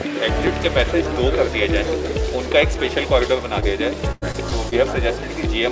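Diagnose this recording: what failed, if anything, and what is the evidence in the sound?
At 0.47 s there's a tiny click, and that's a repeated buffer at the driver/buffer stage. The output side didn't get fresh samples in time, so it replayed the last chunk once more with a hard join on each side. The repeated piece is only about 1.45 ms long, which fits a 64-sample buffer. That's why you hear a tick rather than a stutter, and essentially nothing gets lost.

Around 3.60–3.64 s you get a brief smear, which is short concealed packet loss on the network side. Roughly 20 ms never reached the decoder in time. The receiver papered over the hole by extending the preceding sound and then crossfading back into the real signal. It's short enough to pass as a little wobble.

From 4.12 to 4.73 s it turns choppy. That's repeated packet loss, the robotic sound, again on the network side. There are four holes in that stretch totalling about 160 ms, the longest about 98 ms, so about a quarter of the span is concealment. 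Each patch continues the last sound before the next gap arrives, and that's where the robotic character comes from. The whole thing sits on top of the G.722 call codec, which is why there's nothing above 8 kHz.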